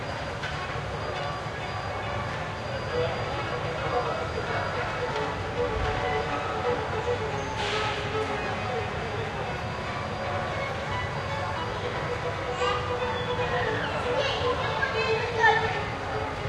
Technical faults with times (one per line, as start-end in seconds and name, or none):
12.13-16.42 train of clicks